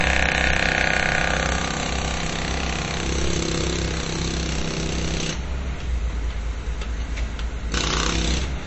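MP3 compression damage runs throughout the clip, from start to finish. Nothing reaches above 8 kHz, so the treble stops at a hard ceiling and the sound feels dull and boxed in. Below that cut, weak frequency content flickers in and out, giving a watery, swirling texture with metallic chirps on bright moments and smeared attacks. The damage is plainly audible and likely comes from MP3 encoding at a starved bitrate, consistent with roughly 32 kbps.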